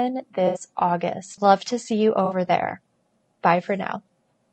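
A speech clip with rough, grainy texture throughout, noise filling the gaps between harmonics and a thin top band, consistent with low-delay AAC compression, likely AAC-ELD near 32 kbps. AAC frame loss with concealment appears at 0.47–0.61 s and again at 2.25–2.35 s after "to see you": 80 ms and 60 ms smeared, phasey patches where the decoder reused the last good spectrum.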